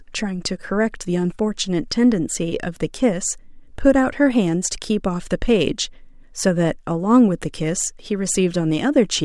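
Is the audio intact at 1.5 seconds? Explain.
Yes, the speech at 1.5 seconds is intact, with no fault at that moment.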